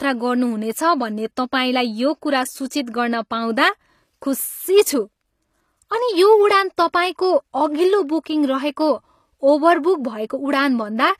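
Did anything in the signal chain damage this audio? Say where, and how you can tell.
Yes, it's the codec stage. The treble sounds gritty and lispy, as if copied up rather than captured, with nothing above 14.9 kHz. That's likely HE-AAC compression, which fits a bitrate around 24 kbps.

There's pre-echo too, at 2.70 s and 6.76 s. A short hiss creeps in about 11 to 12 ms before each attack, where the block's quantisation noise spilled backwards into the quiet.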